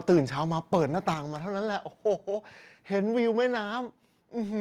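From 0.09 to 0.19 s the speech takes on a harsh, crackling edge. This is microphone overload, likely from an input volume set so high that peaks ran about 4 dB past the converter's limit, flattening around a tenth of the samples. Unlike codec distortion, the grit sits only on the loudest moments.

Microphone volume stepped down twice: at 0.14 s the level drops by 2 dB, and at 1.14 s by a further 4 dB, likely the call software cutting input gain after that overload. Each drop is one abrupt step, not a gradual fade or pumping compression.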